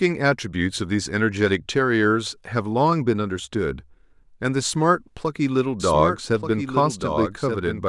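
From 5.80 s to the end, a doubled audio track appears: a second, full-band copy of the speech trails about one second behind, roughly 5 dB quieter, entering abruptly with no decay or room colour. This likely comes from a slower capture path or misaligned edit.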